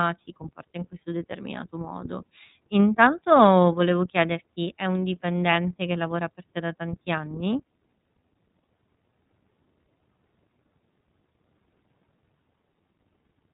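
Speech, carrying the sound of the iLBC codec from start to finish. Nothing above about 3.8 kHz survives, so the audio is narrowband and thin. The codec damage is plainly audible. The voice has a rough, slightly synthetic edge. Each short frame's excitation is coded on its own, without help from the frame before. The texture fits 30 ms frames at around 13.33 kbps, the codec's lower-rate mode.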